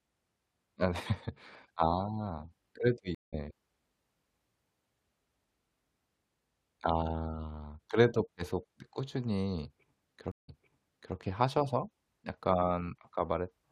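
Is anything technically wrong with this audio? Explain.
Yes, there are two stream reconnects. At 3.15 s the audio drops out for about 0.18 s and picks up slightly later, skipping a bit. At 10.32 s a 0.17 s gap resumes 0.67 s earlier, so a stretch repeats. Each time the connection broke, the player restarted its decoder mid-stream, and the audio eases back in.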